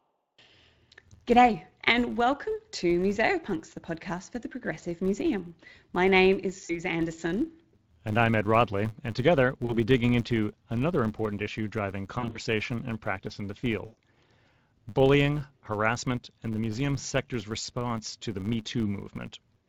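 A filter restarted on every block runs through the whole speech clip. Because the filter drops its stored state at each block boundary and starts again from zero, every block opens with a small transient. These repeat at 100 Hz and form a steady buzz whose loudness rises and falls with the speech level. That rate fits blocks of about 10 ms.

VoIP packet loss concealed by the speech codec appears four times: 6.65 to 6.82 s, 9.65 to 9.77 s, 12.19 to 12.39 s and 13.85 to 13.98 s. The first two gaps sound like about 40 ms of missing audio. The last two sound like about 120 ms. At 12.19 s the loss is broken into pieces spread over about 160 ms, and the longest continuous run is 60 ms. In each gap the decoder carries the last pitch and spectral shape forward while lowering the gain, so the speech smears and fades. It stays weak for a short time after real audio returns. The Speex coding itself leaves only light damage.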